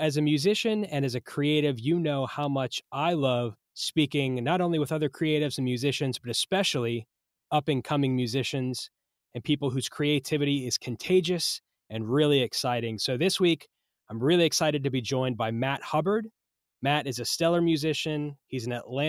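At 2.43 s, between "creative you know how" and "much I love speaking", there is an electrical switching spike. A sharp snap sits on top of the speech. It is quiet, peaking at about -35 dBFS. A nearby switch or discharge likely arced into the line.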